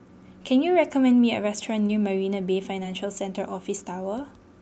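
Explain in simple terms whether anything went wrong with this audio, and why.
Two brief smears, at 1.87 to 1.91 s and 2.83 to 2.86 s, are short concealed packet loss: about 20 ms of the call arrived too late, and the receiver patched the gap by continuing the sound just before it.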